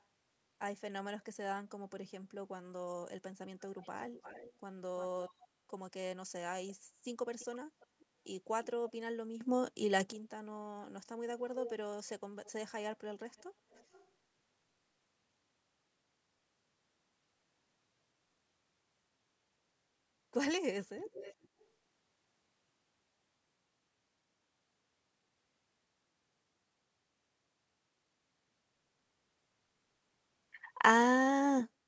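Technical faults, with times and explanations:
1.20–1.24 s, 3.60–5.43 s, 6.70–8.91 s, 11.64–14.11 s, 20.99–21.67 s, echo leak: a delayed copy of the speech trails the original by roughly 340 to 410 ms. It starts as a barely audible scrap near 1.2 s, about 40 dB down, and grows to about 15 dB below the speech in the later stretches. The likely cause is a far end playing the call on a loudspeaker whose echo canceller let part of the returned signal slip back into the line.
9.41–10.12 s and 28.35 s to the end, sudden gain jump: the level steps up abruptly by 11 dB, then later by 14 dB, with speech and background noise rising together at the same instant rather than swelling gradually. The first step falls back after about 0.7 s, while the second holds until the clip ends. This instant step, with no fade, is most consistent with a digital gain change applied from one sample to the next without any smoothing ramp.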